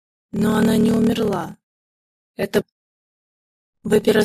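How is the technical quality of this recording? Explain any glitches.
The technical quality is poor: a steady buzz and slowed playback run through the whole recording, and there is one abrupt jump partway through.

Block size mismatch (padded), throughout: the sound carries a low buzz at about 38.3 Hz and plays at 0.889 times normal speed, roughly 11% slow, with pitch essentially unchanged. An upstream stage appears to deliver shorter blocks than the next stage consumes, which fits 1024-sample writes into larger reads. The shortfall in each block is zero-filled, so a brief silence recurs at the block rate, producing the buzz and stretching the timeline.

Stream segment skipped, 2.60 to 2.62 s: the audio jumps abruptly forward at this point, with a small blip at the join and no continuity across it. The likely cause is a segment of the stream that failed to load, with the player continuing from the next segment that did arrive. 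Whatever that missing segment held is absent, so the sound resumes somewhere later than where it left off.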